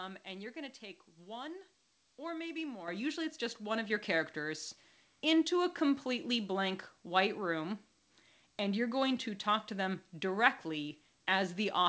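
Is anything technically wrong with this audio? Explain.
Yes. Microphone volume stepped up twice: the call software raised the input gain in single jumps, about 8 dB at 2.88 s after "take one or maybe", then about 4 dB at 3.90 s after "it's just one of". Speech and background both suddenly get louder. The call path's band limit, with nothing above 8 kHz, fits a wideband codec such as G.722.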